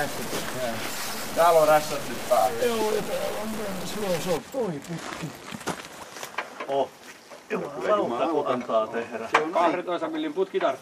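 From the start to 4.37 s, the audio carries harsh, buzzy distortion, and quiet stretches fill with steady noise. This is likely a stuck bit. One data bit holds a fixed value, so roughly half the samples shift by a step near about -30 dBFS.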